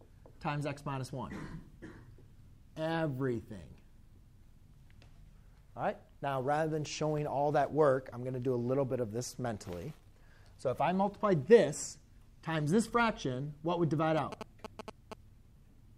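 From 14.17 s to 15.13 s, GSM signalling bursts break in: a galloping dit-dit-dit of ticks and short buzzes at about 217 Hz, sitting roughly 10 dB below the wanted sound. A nearby 2G phone's bursts were rectified by the audio circuit. Unlike the steady buzz of a phone transmitting through a call, or mains hum locked to 50 or 60 Hz, this comes in irregular clusters and then stops.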